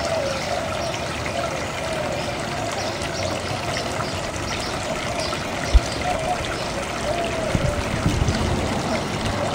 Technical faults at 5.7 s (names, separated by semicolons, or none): corrupt frame decoded